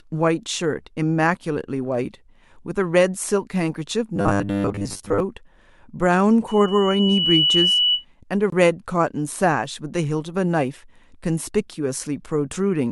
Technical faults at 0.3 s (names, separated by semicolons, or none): none